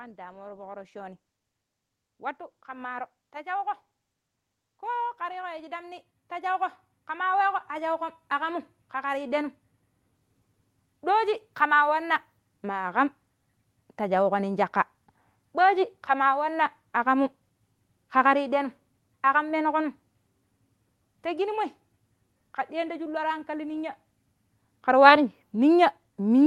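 From 0.15 to 8.04 s, automatic gain rising is heard. The gain control judged the input too quiet and raised its gain slowly, by about 19 dB. Speech and background noise swell together. The call path's coding leaves the top above about 12 kHz missing.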